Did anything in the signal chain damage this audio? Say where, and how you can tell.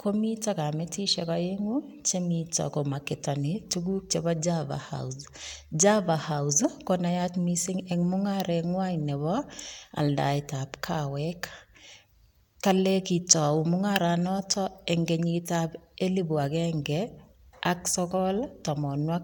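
No, nothing in the signal chain damaged this audio.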